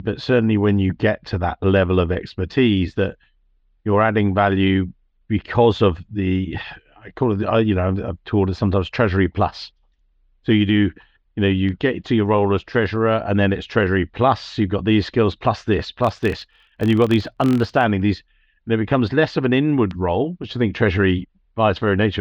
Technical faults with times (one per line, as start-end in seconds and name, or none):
1.77 bit error spike
2.58 bit error spike
11.69 bit error spike
16.05-17.86 filter restarted on every block
19.91 bit error spike